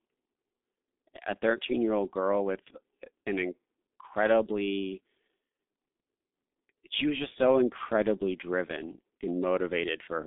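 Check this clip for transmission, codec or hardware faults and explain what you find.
One fault runs through the whole recording: speech-codec damage of the G.723.1 kind.

From start to finish the speech sounds muffled and hoarse, with smeared consonants. G.723.1 coding cuts the band to roughly 200 Hz to 3.6 kHz, leaving nothing above 3.7 kHz. Its slow 30 ms frame updates blur transitions, heavy damage that fits a bitrate near 6.3 kbit/s.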